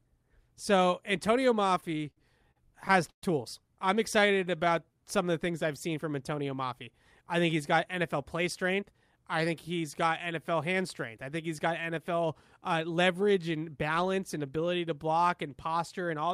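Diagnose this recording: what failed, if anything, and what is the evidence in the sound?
Repeated stalls (stutter) at the network/jitter-buffer stage, from 1.60 to 3.23 s. Packets arrived late, so the buffer ran dry thirteen times and the receiver stretched the last sound across each gap, filling 321 ms in all (about a fifth of that span), the longest hold 130 ms. Nothing is lost, but the sound drags and hiccups. A spectrogram shows repeated flat, smeared frames, longer ones fading in level; the waveform shows copied cycles with no new envelope.

Jitter buffer slow-down, same stage, from 4.19 to 5.17 s, just before "of the things I've". With the buffer low, the receiver repeated single pitch periods to rebuild its reserve, adding 110 ms and running the speech at 90% speed without changing pitch. On a spectrogram the harmonics keep their frequencies while syllables stretch horizontally. 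The waveform shows a run of near-identical periods where sounds are drawn out.

Jitter buffer speed-up, again in the jitter buffer, from 7.21 to 10.37 s before "hand strength I think" at 104% speed, and from 13.90 to 14.43 s between "uh leverage and" and "ability to block and" at 106%. An overfull buffer made the receiver cut short pitch-period pieces, removing roughly 150 ms and 40 ms. Pitch holds, so the spectrogram's harmonics stay level while syllables compress. The waveform shows periods missing at splice points.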